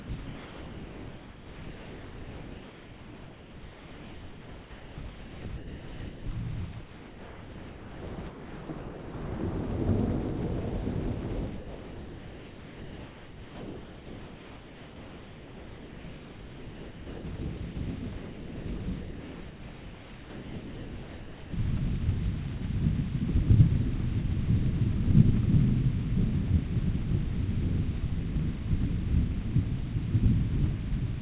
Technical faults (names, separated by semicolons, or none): sound chopped by the voice detector; sound dropped by the voice detector